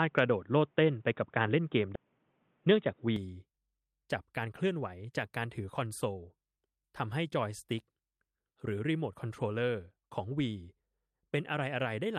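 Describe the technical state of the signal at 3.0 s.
At 3.0 s the audio is narrow and boxy, with nothing above 3.8 kHz, a different background hiss about 45 dB below the signal and a level offset of about 5 dB. It has sounded this way since 0.0 s and clears abruptly at 3.16 s with no gap. This is likely the input switched to a poorer device. A plain low-pass filter or codec cut would not also change the noise floor and level in one step at the same instant.

Just before this moment, from 2.05 s to 2.93 s, there is a jitter buffer speed-up. The receiver cut short pitch-period pieces, around a tenth of a second in total, so the audio runs at 112% speed and sounds hurried. The pitch stays where it was. That separates it from a resampling or clock-rate error, which would raise the pitch along with the speed. By 3.0 s the normal pace has returned.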